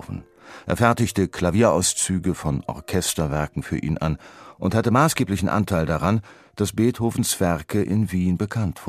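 No technical faults are audible anywhere in this speech recording.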